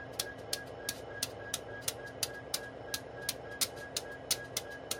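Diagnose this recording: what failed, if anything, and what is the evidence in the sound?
Nothing in this recording of sounds points to a failure at any stage, so there's nothing to diagnose here.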